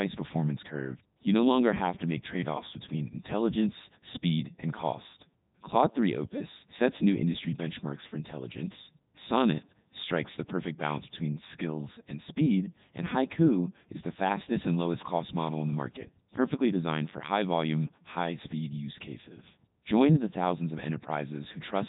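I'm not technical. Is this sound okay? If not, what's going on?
No, it isn't. The whole clip has been through the Codec 2 vocoder, a very low-bandwidth speech codec used in digital radio. It doesn't keep the actual recording. It sends a rough description of pitch, loudness and tone colour, and the far end rebuilds the speech from simple tones. That's why it sounds robotic and buzzy from start to finish. There's also nothing above 3.8 kHz, so it sounds dull and boxy too.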